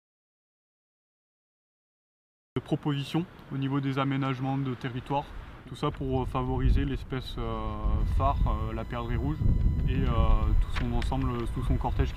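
From the first instant until 2.56 s the track holds an audio dropout to silence, already under way when the clip opens: plain silence with no room tone at all. The input was likely lost upstream while recording continued, so anything present then is gone.

At 8.00 s a USB whine enters and runs to the end, a steady tone at 1 kHz, the rate of the bus's 1 ms frames. It sits well below the main signal, leaking in through shared power or ground.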